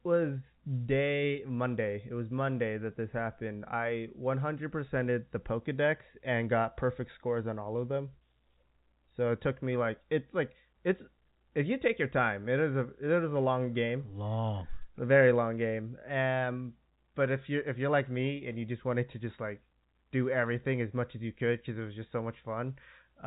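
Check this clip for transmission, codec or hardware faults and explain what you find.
No faults detected.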